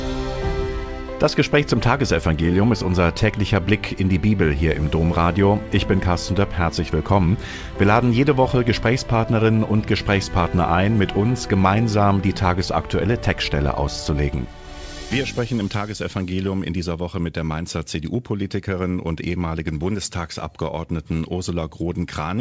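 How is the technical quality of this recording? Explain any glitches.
No audible glitches or faults.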